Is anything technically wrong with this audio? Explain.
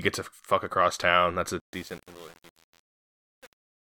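Yes. From 1.6 s to the end at about 4.0 s there is truncation distortion on a fade. The speech fades out from roughly 1.6 s, but the stage applying it drops the low-order bits without dither. The coarseness fits an 8-bit word length. As the level sinks toward the smallest steps, the waveform collapses into a few square stairs, so the tail turns gritty. A noise gate would cut cleanly in and out. Here the grit sits on the fading level itself, which points to quantisation rather than gating.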